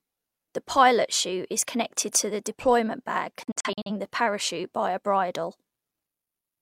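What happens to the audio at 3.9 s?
At 3.9 s the audio is just coming out of a digital broadcast dropout that runs from 3.43 to 3.91 s, between "to the deployment bag" and "the parachute by a". The receiver stopped getting clean frames and muted each failed one, which points to about five lost frames. The sound breaks into several short holes, each cut with a 3 ms fade, the longest 43 ms, totalling 213 ms of missing audio scattered over 427 ms.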